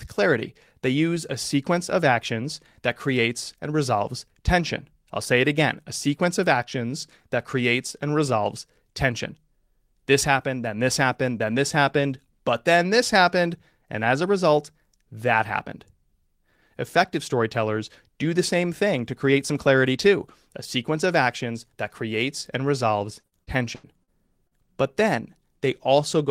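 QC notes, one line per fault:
23.19–24.10 s, repeated packet loss (robotic sound): choppy stretch right after "that creates and resolves"; five dropouts, longest 83 ms, patched by extending prior sound, about a quarter concealed.
24.47–24.54 s, short concealed packet loss: brief smear where roughly 40 ms never arrived in time; the decoder continued the preceding sound, then blended back.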